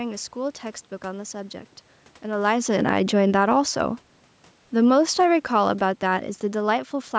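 Automatic gain falling runs from 2.24 to 4.06 s and again from 4.73 to 7.14 s. The call's gain control judged the input too loud or its background noise too strong and eased its gain down, by about 5 dB in the first stretch and about 6 dB in the second. The speech sinks gradually, and the room noise behind it sinks with it. That shared drop points to the gain stage, even though the talker also shifts position around 2.5 s.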